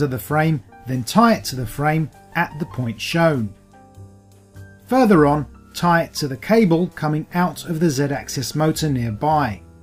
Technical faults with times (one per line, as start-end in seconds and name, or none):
none